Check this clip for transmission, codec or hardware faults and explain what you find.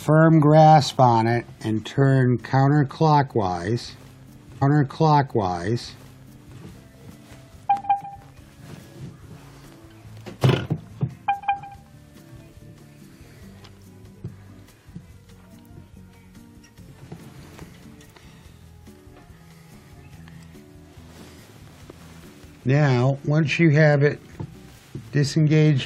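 One transmission fault is present: a stream segment repeated between 4.61 and 6.61 s. The player fetched or queued the same segment twice, so about 2.0 s of audio plays again after a jump back. Unlike a buffer stutter, which loops tiny fragments, this replays an entire intact stretch.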